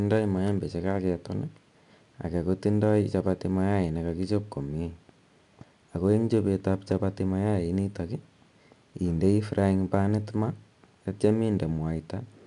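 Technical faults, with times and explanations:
throughout, 4-bit ADPCM compression: gritty hiss rides every loud syllable as prediction steps leave level-following noise; spectrogram shows broadband grain and nothing above 10.6 kHz.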